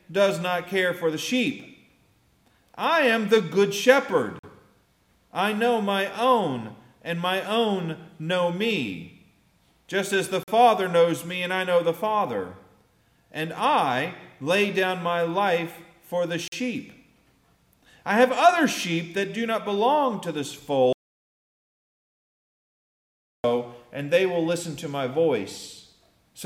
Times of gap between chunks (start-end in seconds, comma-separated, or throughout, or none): 4.39-4.43, 10.43-10.48, 16.48-16.52